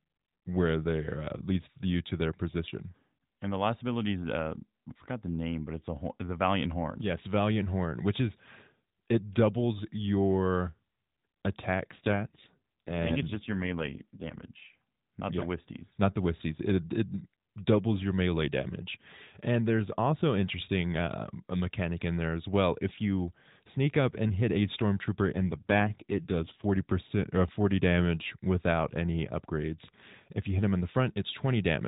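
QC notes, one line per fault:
11.92–14.45 s and 25.32–26.67 s: AMR rate drop. The speech turns buzzier and more synthetic with no gap and no narrowing of band, which fits a step from 12.2 to 5.9 kbps.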